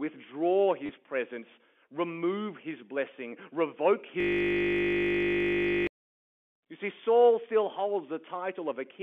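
Speech over a telephone line, with the band sitting roughly between 200 Hz and 3.4 kHz, and two dropouts you'll notice. At 0.86 s there's a packet loss with the last packet repeated. About 30 ms of audio went missing, which fits three 10 ms packets, and the receiver covered the gap by replaying the last good one. You get a quick robotic stutter right before "presence remove his blessing." The bigger problem is a system hang loop from 4.20 to 5.87 s, just after "remove his blessing revoke." The machine froze while the audio hardware kept cycling one 20 ms chunk of its buffer, roughly 80 times over. That comes out as a steady 50 Hz buzz for about 1.7 s.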